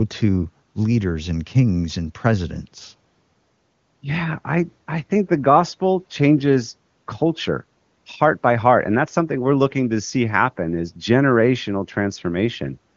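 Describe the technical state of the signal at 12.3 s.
At 12.3 s the speech is intact, carried on the AMR wideband (HD Voice) codec at its top rate of 23.85 kbit/s, where any coding trace is faint at most.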